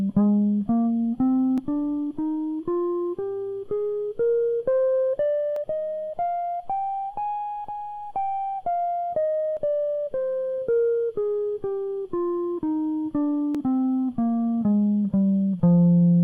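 Overlap between stream segments occurs at 1.58, 5.56, 9.57 and 13.55 s, one every 4 seconds. That spacing matches the segment boundaries of the music stream. At each join, two segments claim the same stretch of time, and the player drops the overlapping portion even though that music was never duplicated. Between 7 and 18 milliseconds of the waveform vanish and the signal jumps discontinuously, producing a short click or tiny skip at each of the four points.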